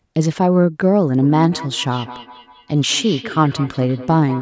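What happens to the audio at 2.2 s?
At 2.2 s the speech carries a feedback echo between two devices, running from 1.21 s to the end at 4.41 s. Each word returns roughly every fifth of a second, at about 15 dB below the speech. A second device nearby replays this microphone's audio, and the microphone picks it up again.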